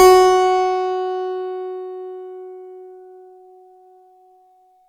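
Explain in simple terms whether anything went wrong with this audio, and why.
Nothing went wrong here: the recording of sounds has no audible technical faults anywhere in it.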